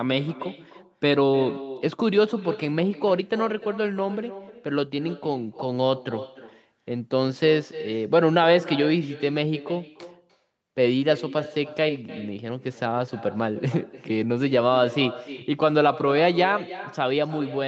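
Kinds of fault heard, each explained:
Echo with no canceller: every phrase is trailed about a third of a second later by a thinner copy about 15 dB down, because the far end's loudspeaker feeds its microphone unremoved.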